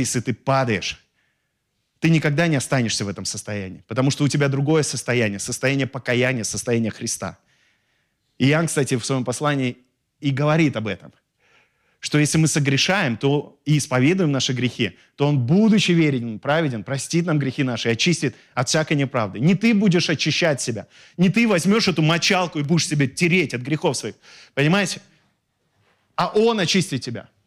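Across the whole recording, the speech reaches a stage in the chain that cannot pass its full level, driven roughly 4 dB past that limit, so the highest peaks are sliced flat. That is hard clipping. Only a small fraction of samples, under one percent, hit the ceiling, so the flattening is confined to the loudest moments, where the squared-off tops throw harmonics high into the spectrum and come through as brief crackle on emphatic peaks rather than constant fuzz.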